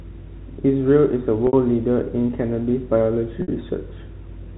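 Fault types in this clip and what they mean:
Packet loss with pitch repetition: Around 60 ms of audio drops out at 1.47 s and again at 3.42 s, which fits two consecutive 30 ms packets each time. The receiver fills each gap by looping the last pitch cycle, giving a brief buzzy hold that fades out before the speech cross-fades back in.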